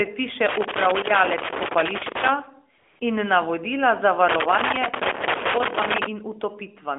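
Speech carried over a mobile phone link, band-limited to roughly 300 Hz to 3.5 kHz with the light coding roughness that fits AMR-NB at 12.2 kbps. Twice the sound is interrupted by an irregular burst of scratching and crackle, first from 0.49 to 2.29 s and again from 4.29 to 6.06 s. This is loose connector crackle: a worn or dirty contact keeps making and breaking as it shifts, chopping the signal into fragments, while any DC on the line turns each break into a click. Between these, from 2.78 to 3.00 s, the real background drops out for about 220 ms and is replaced by a smooth, even hiss that switches in and then out again. That is AMR comfort noise. The phone treated the moment as silence and stopped sending speech frames, so the receiving end filled the gap with synthetic noise built from a rough estimate of the background's level and spectrum.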